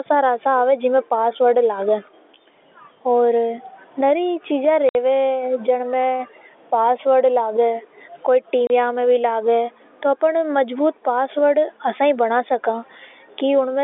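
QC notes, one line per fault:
4.89–4.95 s and 8.67–8.70 s, packet loss filled with silence: the speech drops into dead holes of 60 ms and 30 ms with hard edges, pointing to 30 ms packets lost in transit and replaced by silence, over G.711's narrow 300 Hz–3.6 kHz telephone band.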